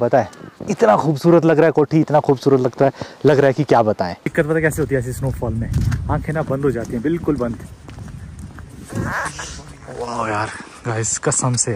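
Peaks crackle in three places: briefly from 0.14 to 0.19 s, then for a longer stretch from 0.83 to 2.88 s, and again from 3.27 to 3.81 s. This is hard clipping. The signal overran what a stage in the chain could pass, by about 1 dB in the first burst and about 2 dB in the other two. The waveform tops were sliced flat, which added the high harmonics heard as that crackle.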